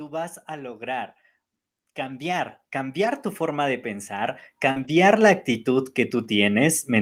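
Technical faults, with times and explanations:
0.05–1.16 s and 1.81–6.59 s, automatic gain rising: the gain control judged the input too quiet and raised its level gradually, by about 4 dB in the first stretch and about 15 dB in the second, so speech and background swell together rather than jumping.
3.05–3.07 s, 4.76–4.90 s and 6.24–6.26 s, lost packet rebuilt from error correction: single lost packets at the outer times and four in the middle run were replaced by the low-bitrate copies carried in following packets, so there is no gap, only briefly rougher, noisier speech.
4.71–4.78 s, short concealed packet loss: about 40 ms of the stream arrived too late, and the decoder filled the hole by extending the preceding sound before blending back, heard as a brief smear or wobble leading straight into the rebuilt stretch.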